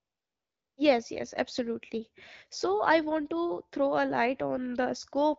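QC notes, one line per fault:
0.00–0.77 s, AMR comfort noise: the phone sent no speech frames, so the receiver substituted smooth synthetic noise for the real background.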